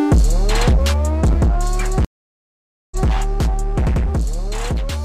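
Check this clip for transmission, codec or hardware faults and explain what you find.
One transmission fault turns up: a stream reconnect between 2.05 and 3.10 s. The connection dropped, so the player had nothing to play, re-established the link and started a new decoder partway through the stream. You hear about 0.87 s of silence. When the audio returns, it picks up about 0.19 s earlier than where it cut off, which points to the server resending a short burst, so a brief stretch of sound is heard twice.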